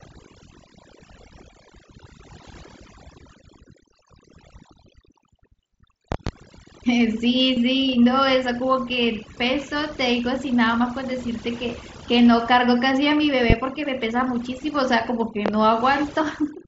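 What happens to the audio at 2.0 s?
At 2.0 s the speech is under overdone noise removal, present across the whole clip: bands near the noise estimate are pulled almost to silence, leaving twinkling specks in the background. Unlike a noise gate, the dropouts are per-band, not whole-signal.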